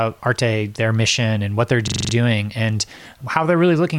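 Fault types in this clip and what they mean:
system hang loop: a rapid 23.4 Hz stutter, one 43 ms slice repeating six times, as the frozen system left the hardware replaying the same buffer.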